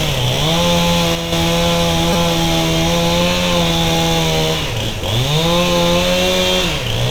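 At 1.15 s the level drops by about 6 dB in one step until 1.32 s. This sudden gain jump likely comes from a gain change applied without a ramp. At 2.13 s and 4.62 s there are repeated buffers. A 5 ms piece replays four times, then once, heard as brief buzzy clicks.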